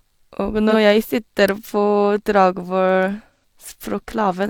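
At 0.70 to 0.75 s there's a short AAC frame loss with concealment, consistent with one dropped frame. The decoder patches it from the last good spectrum, leaving a brief smeared, phasey blur. At 3.35 to 3.44 s it happens again, likely two frames, and runs longer.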